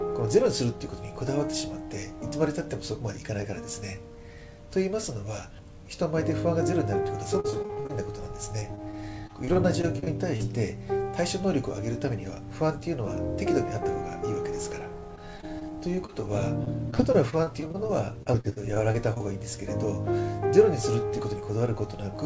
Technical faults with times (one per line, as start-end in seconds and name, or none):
7.40-7.91 repeated packet loss (robotic sound)
8.59-10.42 repeated packet loss (robotic sound)
12.05-13.13 jitter buffer speed-up
15.16-19.22 repeated packet loss (robotic sound)